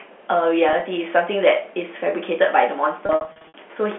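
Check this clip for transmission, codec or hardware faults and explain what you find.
There's one real problem here: packet loss with pitch repetition, showing up twice over the telephone path. The G.711 coding itself sounds clean, with the usual narrow phone band.

The first burst runs from 0.69 to 0.81 s. About 30 ms goes missing in 10 ms scraps spread across 120 ms, which fits 10 ms packets. Each time a packet goes missing, the receiver loops the last pitch period to cover the hole. Because the gaps are so short, you hear only a slight buzzy hold on the sound.

The second burst, from 3.06 to 3.54 s, is much rougher. Around 310 ms is lost over 480 ms, with runs up to 60 ms. That's longer than the roughly 50 ms fade on the repeated period, so the audio goes buzzy, dips to silence, and then cross-fades back in.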